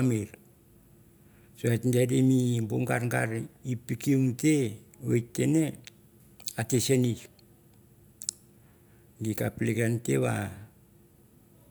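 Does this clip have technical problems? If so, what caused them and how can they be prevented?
No, nothing in this recording stood out as a technical problem on listening, so there is nothing here that needs preventing.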